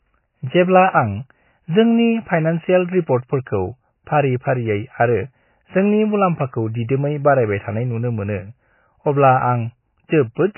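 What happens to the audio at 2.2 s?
At 2.2 s the speech sounds watery and muffled, with nothing above 3 kHz, as it does throughout the clip. The likely cause is heavy MP3 compression, consistent with about 16 kbps, cutting the treble and dropping weak frequency lines.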